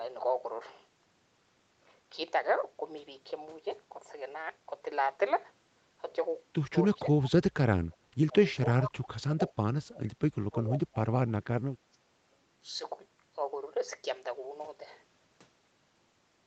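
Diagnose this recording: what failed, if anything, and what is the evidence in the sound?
Speech suppressed in double talk, in the call processing stage, is the likely cause of repeated dropouts. There is a brief, shallow dip of about 5 dB at 7.02 to 7.08 s. Much deeper gaps of about 25 to 35 dB follow at 7.81 to 8.36 s, 8.75 to 9.53 s, 9.73 to 11.16 s and 11.88 to 12.22 s. The echo canceller could not tell this talker from loudspeaker echo while both sides spoke, so it attenuated everything. On a waveform the envelope collapses abruptly in those spans.

Echo leak is heard as two short repeats of earlier sound, at 7.23 to 7.31 s and at 8.84 to 8.89 s. Each arrives 438 ms after its source, about 20 dB and about 10 dB below the speech respectively. The far end's canceller likely let some of its loudspeaker pickup slip back into the call. On a spectrogram these appear as quieter copies of earlier harmonic patterns shifted right by about 0.44 s. 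In the waveform they are small bursts sitting between or under the main speech.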